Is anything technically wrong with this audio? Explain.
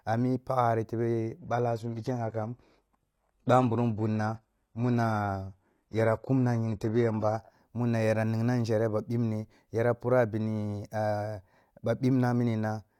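Yes. From 1.38 to 7.38 s the speech drops to an adaptive stream at a lower bitrate: the slowed connection pushed playback onto a much leaner encode, so treble above about 12.3 kHz vanishes, with no gap at either switch.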